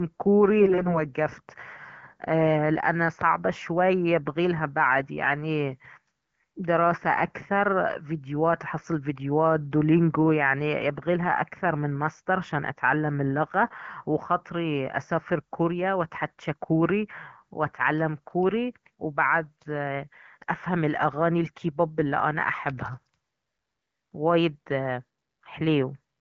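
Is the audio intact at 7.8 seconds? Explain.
Yes, the audio is intact at 7.8 seconds, with the speech carried cleanly through the AMR wideband (HD Voice) codec at 12.65 kbit/s.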